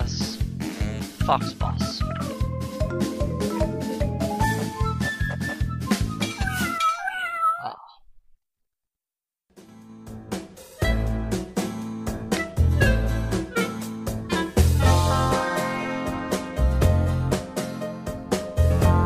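Nothing goes wrong anywhere in the audio, so there's no fault here to describe.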